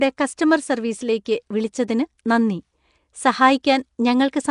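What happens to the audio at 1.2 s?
A pre-echo occurs at about 1.25 s. A sharp attack lands late in a transform block, and the noise sized for that loud onset spreads back into the quiet moment before it. About 11 ms of hiss precedes the attack, which sounds soft and smeared.

Throughout, the speech has a rough, hissy halo and a watery smear. Nothing sounds above 10.6 kHz. The damage is plainly audible and points to a bitrate near 44 kbps. Nellymoser compression is the likely cause: weak bands receive no bits and are filled with noise.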